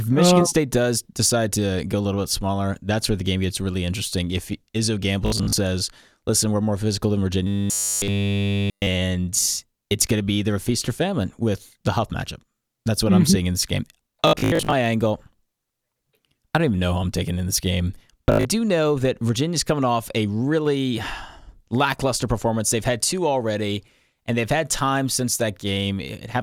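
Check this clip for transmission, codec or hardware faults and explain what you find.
Two kinds of fault are audible: three bursts of Bluetooth stutter and one stretch of robotic sound from repeated short buffers.

Bluetooth stutter occurs at 5.26 to 5.53 s, 14.27 to 14.73 s and 18.28 to 18.45 s. Audio data arrived late or not at all. The receiver replayed its last slice until fresh data came. About 150 ms, 300 ms and 130 ms of speech are lost across those spans, with the longest gaps at 56 ms, 75 ms and 75 ms. Each burst is a jittery, machine-gun stutter, after which the speech jumps forward.

Robotic sound from repeated short buffers runs from 7.47 to 8.87 s. The speech becomes a rigid metallic buzz throughout that stretch, pitched at 100 Hz. The likely cause is audio arriving too seldom, so the software loops a tiny chunk in place of the missing sound. A 100 Hz buzz fits a chunk about 10 ms long repeated over and over. 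The buzz still roughly tracks the speech's rhythm.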